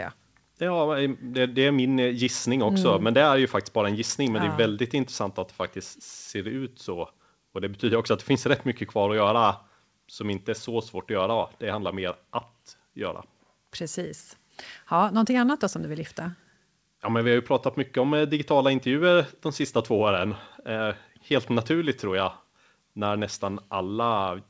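No technical faults can be heard anywhere in this speech recording. It has come through a WebRTC call path working as intended, and the audio stops at 8 kHz, which fits a wideband codec such as G.722 along with that codec's usual coding noise.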